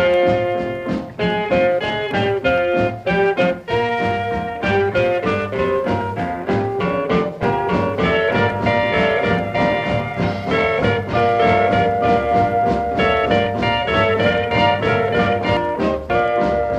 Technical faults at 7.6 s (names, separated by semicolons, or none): doubled audio track